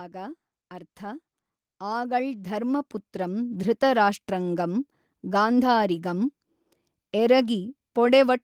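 From 0.11 to 3.84 s the automatic gain rising kicks in: the AGC judged the input too quiet and lifted it about 12 dB, so speech and background swell together.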